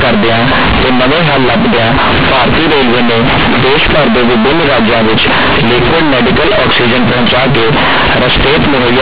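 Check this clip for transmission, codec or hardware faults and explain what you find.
The speech has one fault throughout: companded audio read as linear. A-law bytes are played as plain 8-bit samples without expansion, so each sign change swings across half the range. The result is loud, buzzy distortion with strong noise in the pauses. On a waveform, the trace looks like a dense, even block with no quiet gaps. On a spectrogram, dense broadband buzz fills every pause up to the 4 kHz ceiling set by the 8 kHz A-law telephone coding.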